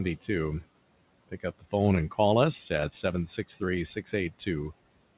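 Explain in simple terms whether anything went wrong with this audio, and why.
Between 1.29 and 1.73 s there is speech cut by the noise suppressor: it mistook parts of the speech for background noise and turned them down along with the quiet room noise, so roughly a tenth of a second of sound comes out faint or swallowed.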